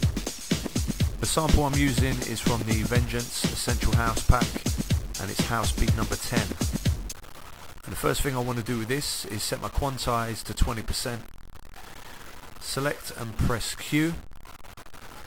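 Harsh, buzzy distortion runs through the whole clip, and quiet passages fill with noise. A stuck bit is the likely cause, throwing values off by about -40 dBFS.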